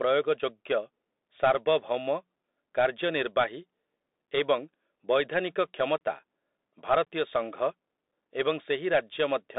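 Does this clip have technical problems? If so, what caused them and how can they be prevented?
Yes. Throughout the clip, the speech went through a Bluetooth CVSD headset codec. This one-bit delta coder fits a 64 kbps headset link. It confines the sound to about 250 Hz to 3.7 kHz, with nothing above 3.8 kHz. Its adaptive step lags, which makes s sounds scratchy, and its constant up-down stepping leaves a granular hiss. Switching the headset to a wideband profile, or recording through a wired microphone, prevents this.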